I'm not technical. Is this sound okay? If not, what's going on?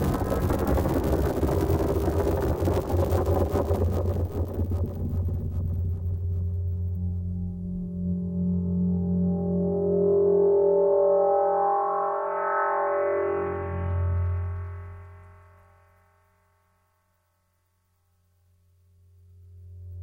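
Yes, this sound is okay, and nothing is going wrong in it.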